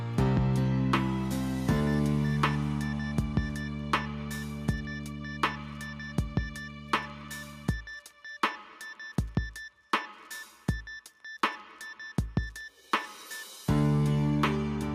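No technical faults can be heard anywhere in this audio.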